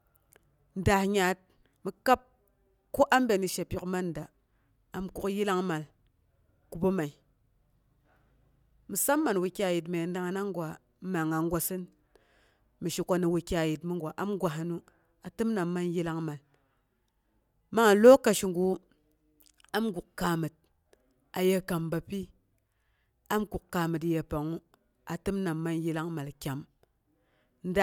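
No technical faults can be heard in this speech, so there are none to describe in time order.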